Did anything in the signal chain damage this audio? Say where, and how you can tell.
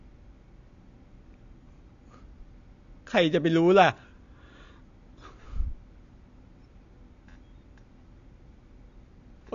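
Yes. At the codec stage, throughout: nothing survives above 7.1 kHz, and the speech is dull and smeared, with fizzy, warbling sibilants. That is likely AAC compression, fitting AAC-LC near 32 kbps, where the encoder drops the top band and coarsely quantises the rest.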